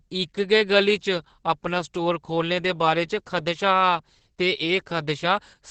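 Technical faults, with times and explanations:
Throughout: Opus voice compression. The speech is muffled, hoarse and slightly robotic, with nothing above about 8 kHz. This points to the SILK linear-prediction coder at a low bitrate of around 10 kbps, coding the excitation coarsely. Unlike a plain low-pass filter, the damage changes the texture of the speech, not just its brightness.
1.98 s and 3.32 s: dropped samples. Each is a single sharp click, a thin vertical line across the spectrum. The likely cause is a tiny fraction of a millisecond of the stream going missing, so the waveform jumps to a later value. There is no audible gap, which separates these clicks from a dropout.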